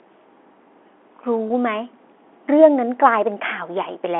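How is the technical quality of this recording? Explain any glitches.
The recording has one brief glitch, carried over telephone-band coding that cuts off above about 3.5 kHz. From 1.48 to 1.50 s there is packet loss with pitch repetition: a gap of about 20 ms, which fits a single lost packet, was filled by repeating the last pitch period. It sounds like a slightly held, buzzy instant. On a waveform it appears as identical repeated cycles, and on a spectrogram as briefly frozen, flat harmonics.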